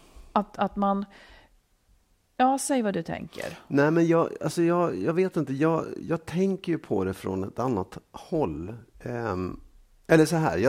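Speech recording with no technical faults audible anywhere in it.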